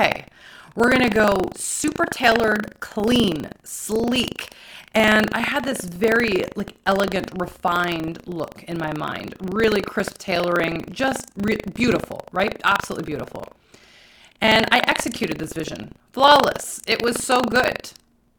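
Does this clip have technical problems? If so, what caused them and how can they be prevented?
Yes. Buffer tearing throughout: the program writing the ring buffer and the hardware reading it have slipped and cross every period, so roughly a tenth of each buffer repeats audio from about 70 ms earlier. That gives the speech a steady 25 Hz robotic buzz. Keeping the writer safely ahead of the reader prevents it.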